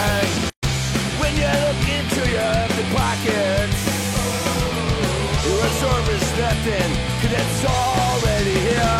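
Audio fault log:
0.50–0.63 s, gap at a join of encoded pieces: 131 ms silence splits continuous sound, leftover encoder delay and padding; flat waveform, blank spectrogram column, smeared edges.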